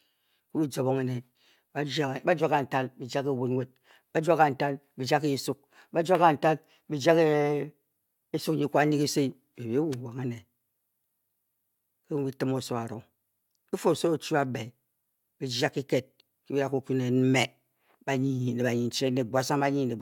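Nothing in this recording stands out as a technical fault; the speech simply runs along without any glitch, dropout or distortion to point to.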